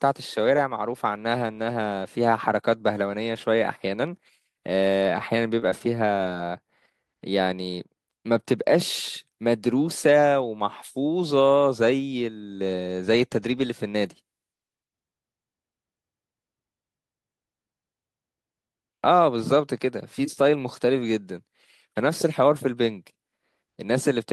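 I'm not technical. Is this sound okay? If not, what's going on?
No. Just before the 6-second mark there are two short glitches, at 5.59 to 5.64 s and at 5.70 to 5.87 s. Each is a short concealed packet loss. About 20 ms of the speech arrived too late to be played. The receiver filled the gap by stretching out the sound just before it, then blended back into the real speech. You may hear a quick smear or wobble. A short consonant may also drop out.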